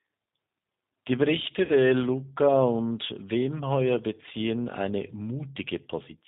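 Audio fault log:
throughout: G.729 codec. The speech has been squeezed through a low-rate VoIP codec, and the sound fits G.729 at about 8 kbit/s. Rather than carrying the waveform, the codec sends a vocal tract filter, a pitch predictor and a few pulses per 10 ms frame, and the decoder rebuilds the voice from those. Everything above 4 kHz is missing, so the speech sounds narrow and dull, and the damage is plainly audible as a rough, slightly synthetic quality.
1.65 to 1.71 s: VoIP packet loss concealed by the speech codec. About 40 ms of the stream failed to arrive, which fits two lost 20 ms packets. The decoder filled the gap by extending its last pitch and filter settings while lowering the gain, so the voice turns into a brief buzzy or noisy, fading smear instead of cutting out. Each frame builds on the one before, so the voice stays weak or distorted for a moment after the packets resume.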